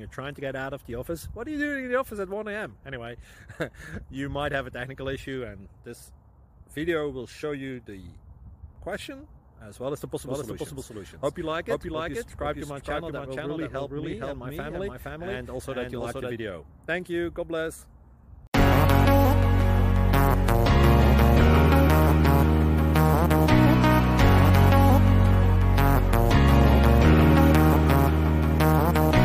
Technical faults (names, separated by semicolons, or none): doubled audio track